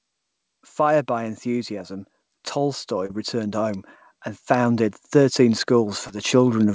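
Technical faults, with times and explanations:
0.76–3.89 s and 4.47–6.74 s, automatic gain rising: The level climbs slowly in two separate stretches. The automatic gain control judged the input too quiet and turned its gain up step by step. In the first stretch the rise is about 5 dB over roughly three seconds. The second rise runs to the end of the clip. Speech and background noise swell together, because the gain lifts everything it receives.
3.06–3.11 s and 6.07–6.11 s, short concealed packet loss: Two brief smears interrupt the speech. At the first, about 40 ms of audio never reached the decoder in time, and roughly 33 ms of it was patched over. At the second, about 20 ms went missing and about 21 ms was patched. The receiver extended the preceding sound to fill each gap and then blended back into the real signal. That makes a short wobble rather than silence.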